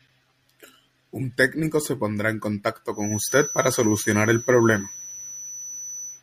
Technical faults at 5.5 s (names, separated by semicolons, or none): feedback whistle